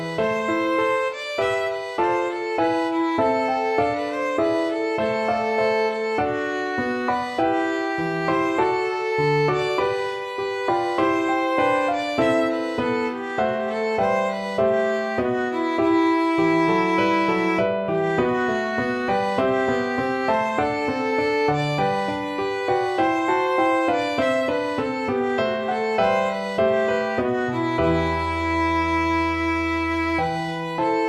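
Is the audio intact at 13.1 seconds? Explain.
Yes, at 13.1 seconds the audio plays through intact, with no fault of any kind at that moment.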